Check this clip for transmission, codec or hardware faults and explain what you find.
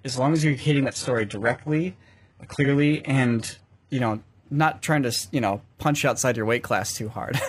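One transmission fault is present. From 0 to 4.0 s, an adaptive stream starting at a low bitrate gives thin, synthetic-sounding treble with nothing above 11.5 kHz. This fits a roughly 12 kbit/s HE-AAC start before the player steps up to roughly 96 kbit/s AAC-LC, where quality improves abruptly without a gap.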